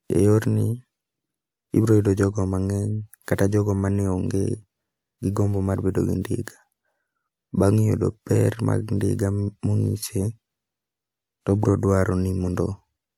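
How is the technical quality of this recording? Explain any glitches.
Nothing here sounds like a glitch: no dropouts, jumps or stray noises interrupt the recording at any point.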